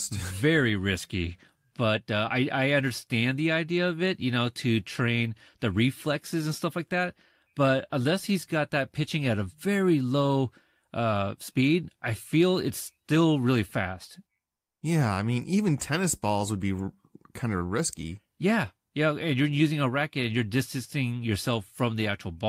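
The sender likely halted transmission during a pause after "it's still really fast", and the receiver substituted comfort noise in place of the background from 14.59 to 14.77 s. For those 0.18 s, the real ambience gives way to flat, featureless noise about 25 dB quieter.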